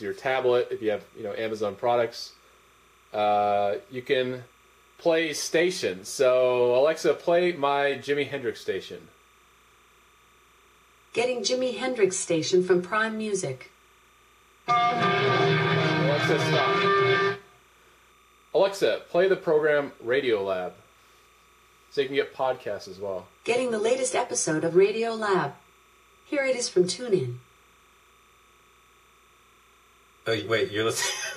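Timecode bleed runs throughout, linear timecode at 29.97 frames per second leaking in well below the sound, a faint chirping warble near 1 and 2 kHz.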